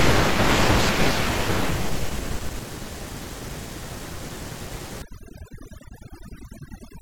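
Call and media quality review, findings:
Overdone noise removal, 5.02 s to end: room noise (about 22 dB down) gated to twinkly silence. Suppressor's too aggressive, zeroing bands near its noise estimate.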